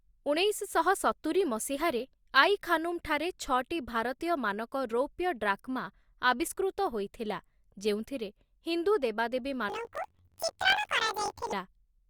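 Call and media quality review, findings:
Planar audio read as interleaved, 9.69 to 11.54 s. Speech jumps an octave high with a flutter near 47 Hz. Each 21.3 ms block plays twice at double speed, first left then right, which fits a 1024-sample buffer. Suspect the channel-format converter.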